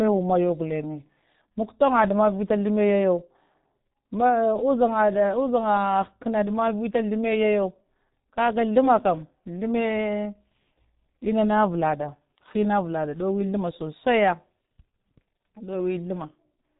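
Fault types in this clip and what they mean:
G.723.1 codec: The speech sounds heavily muffled and hoarse throughout, with smeared consonants and nothing audible above about 3.8 kHz. This comes from a low-rate telephony codec running near 6.3 kbit/s, coding long frames and refreshing its voice model too slowly to follow quick changes.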